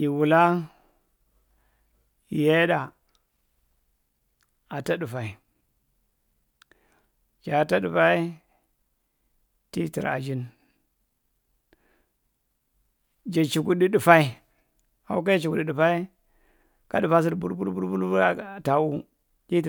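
No technical faults can be heard in the speech at any point.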